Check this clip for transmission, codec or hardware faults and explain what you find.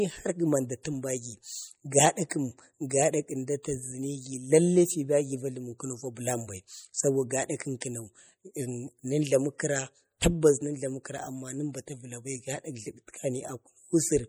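Two faults stand out: codec damage running through the whole speech clip, and two short pre-echo blips.

MP3 compression: The entire clip has a clearly audible watery, swirly quality, with s sounds turning metallic and chirpy and consonant attacks smearing. That's most likely MP3 encoding at a low bitrate, something like 48 kbps. The encoder runs short of bits and zeroes weak frequency lines, which then flicker on and off between frames. The band still reaches about 21.1 kHz, so the harm shows up as that swirl rather than as dull treble.

Pre-echo: At 2.29 s and 7.81 s, a short hiss comes just before a sharp attack, spreading about 16 ms and 13 ms ahead of it. Both attacks land late in a transform block, so the quantisation noise sized for the loud onset is spread across the whole block, including the quiet moment before it. You hear a brief smear of noise leading in, and the attack itself sounds softened.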